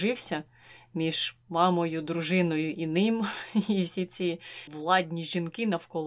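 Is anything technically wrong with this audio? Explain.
No, nothing technically wrong can be heard here.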